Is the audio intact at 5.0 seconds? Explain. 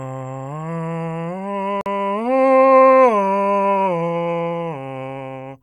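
Yes, at 5.0 seconds the music plays through intact, with no audible fault at that moment.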